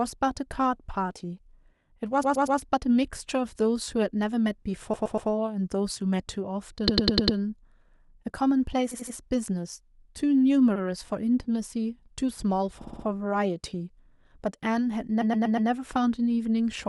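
Repeated frames stutter the speech at 2.23–2.59, 4.93–5.29, 6.87–7.37, 8.91–9.15, 10.75–10.82, 12.81–13.06 and 15.21–15.69 s. Blocks of 60–120 ms play again up to five times, so the spectrogram shows identical slices tiled side by side.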